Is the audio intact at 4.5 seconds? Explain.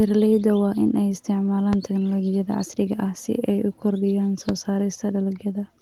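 No. At 4.49 to 4.52 s a single loud pop sits on top of the speech, peaking about 15 dB above it. It is likely a brief voltage step or pulse from a switch, plug contact or static discharge, which the following circuitry shapes into a sharp thump while the speech continues underneath.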